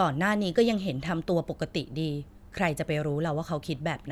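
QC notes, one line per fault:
No faults found on listening; nothing to flag.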